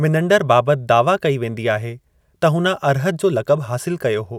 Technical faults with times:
none

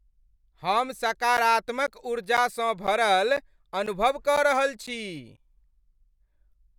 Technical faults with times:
1.37-5.38 periodic USB or driver dropouts

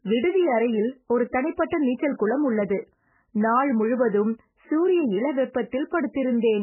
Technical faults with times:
0.00-6.62 MP3 compression

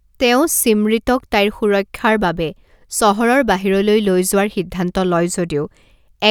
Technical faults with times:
none

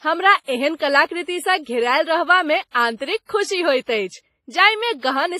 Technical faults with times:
0.00-5.40 WMA compression

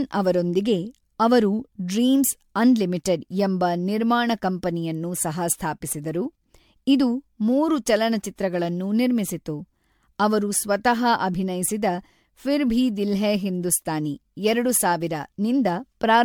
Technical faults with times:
0.00-16.25 generation loss

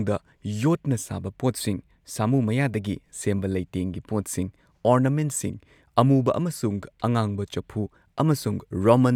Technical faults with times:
none

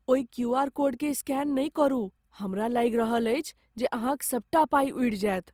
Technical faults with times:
0.00-5.53 Opus compression

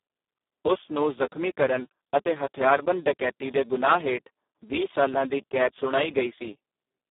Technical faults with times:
0.00-7.10 Speex codec

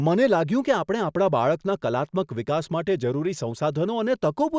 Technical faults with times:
none

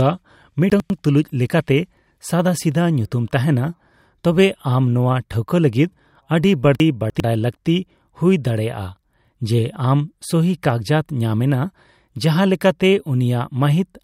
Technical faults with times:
0.70-0.90 chunks out of order
6.80-7.20 chunks out of order

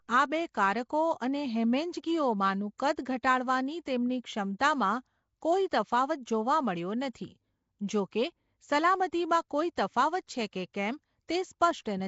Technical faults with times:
0.00-12.08 Nellymoser compression
2.78 pre-echo
9.76 pre-echo
10.27 pre-echo

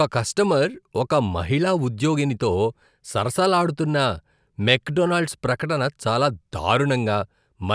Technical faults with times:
none

